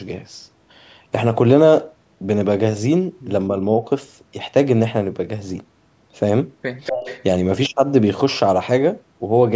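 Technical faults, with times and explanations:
6.86–7.23 s, echo leak: for just over a third of a second a delayed copy of the talker comes back, trailing the original by about 240 ms and fairly loud, only a few decibels under the direct speech. It sounds like a second voice sitting behind the first. That's most likely a far end on speakerphone whose echo canceller didn't fully catch what its mic picked up off the loudspeaker, so the leftover got sent straight back down the line.
6.96–7.06 s, speech suppressed in double talk: right inside that echo stretch the loudspeaker side's voice sags for roughly a tenth of a second, dipping by around 10 dB at its deepest before recovering. With both sides active at once, the canceller likely couldn't tell the local talker apart from the returning echo and clamped down on everything together, which is why the voice briefly ducks exactly where the echo overlaps it.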